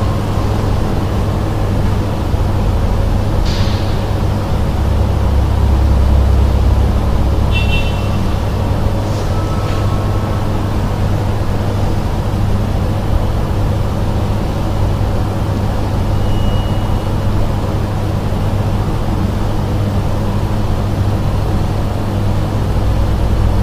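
Listening through, nothing stood out as a technical fault at any point.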